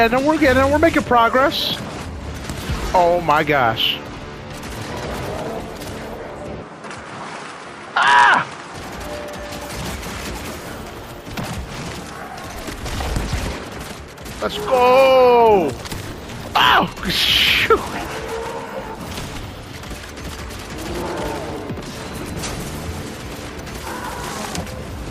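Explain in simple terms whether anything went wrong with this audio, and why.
From 6.62 to 8.74 s the sound turns duller, with nothing above about 10.9 kHz, and a faint new background noise appears. There is no gap or jump in loudness. The likely cause is an input switched to a poorer device for those two seconds.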